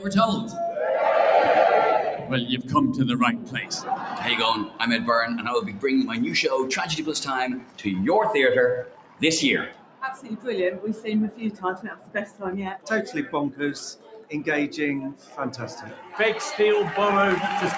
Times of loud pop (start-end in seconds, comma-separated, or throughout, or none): none